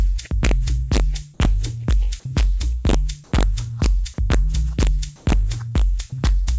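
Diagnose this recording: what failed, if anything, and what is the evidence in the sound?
The fault is an integer overflow at the sample-format conversion stage. Throughout, the loudest peaks are driven about 2 dB past full scale, and a small fraction of samples wrap to the opposite sign instead of being limited. The result is sharp, violent cracks on loud moments. On the waveform these show as vertical jumps from one rail to the other, and on a spectrogram as thin full-band streaks.

The second fault is comfort noise in place of the background, most likely from the call's discontinuous transmission. From 3.24 to 3.32 s and from 5.16 to 5.26 s, the real background, which sits roughly 31 to 32 dB below the loud parts, becomes a flat, featureless hiss about 1 to 2 dB quieter. On a spectrogram, each gap shows as a smooth, uniform patch where the background's fine texture disappears. The audio also has nothing above 8 kHz, which fits a G.722 call codec.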